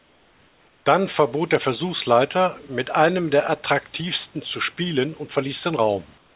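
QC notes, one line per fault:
0.00–0.86 s, comfort noise in place of the background: before speech begins, the room noise is replaced by a steady, featureless hiss about 5 dB quieter than the real background. This is likely because the sender's voice detector stopped transmission during the pause and the receiver filled the gap with synthetic noise shaped to the background spectrum.
6.18–6.35 s, comfort noise in place of the background: after speech ends, the same smooth synthetic noise replaces the room noise for the final 0.18 s, dropping about 4 dB. This is likely discontinuous transmission again. The detail of the room noise, which sits about 34 dB below the speech elsewhere, disappears in this section. The whole clip is band-limited at 4 kHz, which fits a G.711 narrowband call path.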